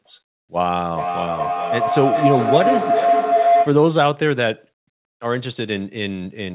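From 0.62 s to 3.88 s, the speech is overtaken by feedback howl. Sound from a loudspeaker is getting back into a microphone on the same call, and each trip around that loop returns louder. The sound narrows to a ringing tone near 700 Hz that pulses about every 0.4 s and peaks about 2 dB above the speech. Unlike plain echo, the repeats swell instead of dying away. All of it sits below 4 kHz, as narrowband telephone coding allows.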